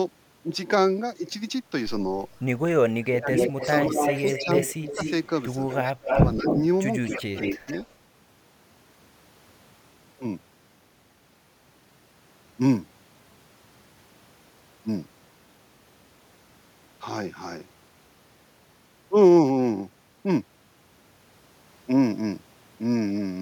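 From 2.93 to 3.94 s the speech is suppressed in double talk. It dips by roughly 30 dB for about half a second in total. An echo leak follows from 3.35 to 6.6 s. A copy of the speech returns 237 ms late, at about the same level as the direct sound. The likely cause is a loudspeaker echo canceller that let its microphone pickup through. The speech dips again from 4.39 to 4.99 s, by roughly 25 dB, and from 5.84 to 6.48 s, by roughly 20 dB. These are likely the canceller turning everything down while both sides talk at once. A second echo leak runs from 7.06 to 7.92 s. This copy trails by 157 ms at about 5 dB below the speech, likely from a loudspeaker echo canceller that let its pickup through. Inside it, from 7.18 to 7.67 s, double talk likely suppresses the speech once more. It drops by roughly 25 dB.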